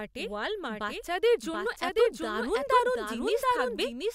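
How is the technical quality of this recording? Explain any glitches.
The recording has a clear technical fault throughout: the speech is heard twice. A doubled audio track, likely from a second capture path or misaligned edit, replays it about 0.7 s late and roughly 5 dB quieter, full-band and without the decay or room colour of a real echo.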